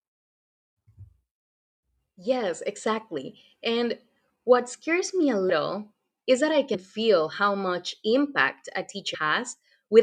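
At 5.49 s, just after "what scares me a", the speech jumps forward by about 150 ms. At 6.73 s, between "is that I" and "feel how much impact", it loses about 100 ms, and at 9.13 s, after "feel how much impact", it loses about 150 ms again. These are compressed frames skipped: whole frames never reached playback, and the jump sizes fit 24 ms frames.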